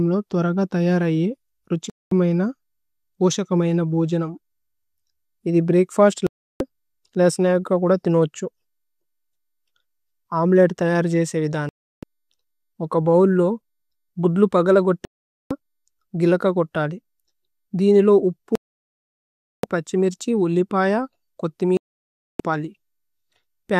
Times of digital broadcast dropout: 1.90-2.12, 6.27-6.61, 11.69-12.03, 15.05-15.51, 18.55-19.64, 21.77-22.40

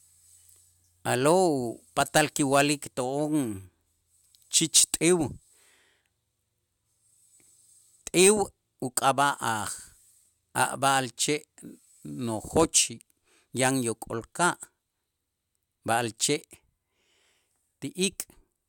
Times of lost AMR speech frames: none

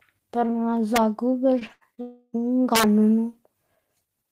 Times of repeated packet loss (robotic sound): 1.59-1.99

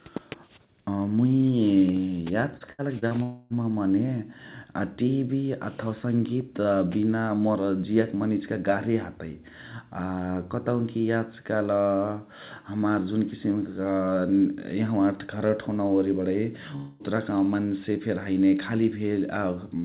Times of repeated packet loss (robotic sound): 2.57-3.14

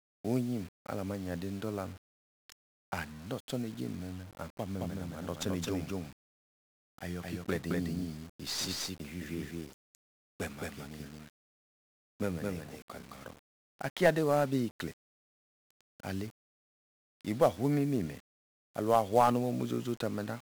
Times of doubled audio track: 4.80-13.16

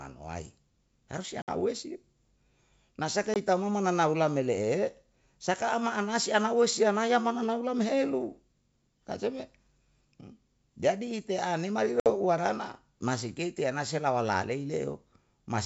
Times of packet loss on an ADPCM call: 1.42-1.49, 3.34-3.37, 12.00-12.08

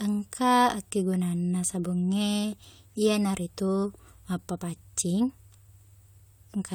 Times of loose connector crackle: none

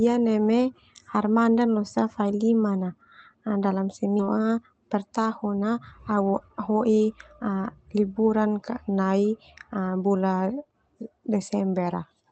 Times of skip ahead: 4.19

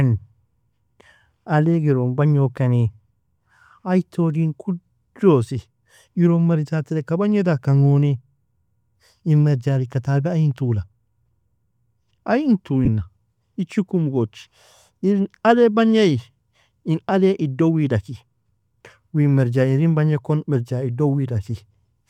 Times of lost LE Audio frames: 12.85-12.88

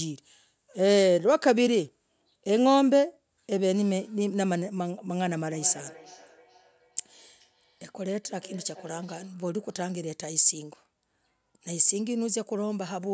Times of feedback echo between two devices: 5.35-9.38

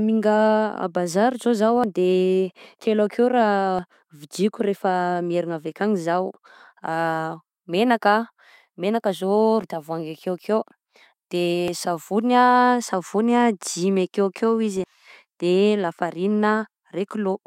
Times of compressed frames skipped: 1.65-1.84, 3.60-3.79, 9.36-9.82, 11.68, 14.75-14.93

